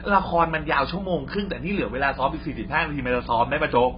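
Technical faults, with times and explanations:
Throughout: mains hum. A steady low tone at 60 Hz sits under the speech, fairly prominent at about 15 dB below the signal. It comes from the power line leaking into the signal path, typically through a ground loop or a nearby transformer.
Throughout: AAC compression. The speech sounds dull and smeared, with a warbling, fizzy texture. Nothing is present above about 5.1 kHz. This points to heavy damage from a low-bitrate codec, likely AAC-LC at around 16 kbps, cutting the top band and thinning the spectrum.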